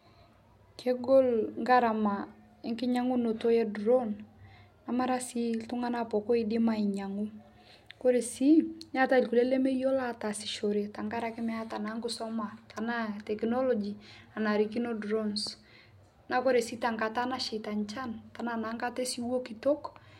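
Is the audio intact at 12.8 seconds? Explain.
No, there's an electrical switching spike right around 12.77 s, a quick, fairly quiet snap riding on top of the speech. It's likely a nearby switch, motor or static discharge arcing briefly, with the audio line picking up that burst of interference.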